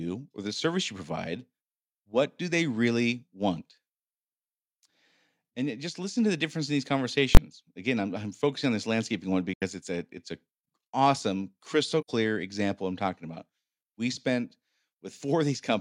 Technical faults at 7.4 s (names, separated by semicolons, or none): invalid numbers at full scale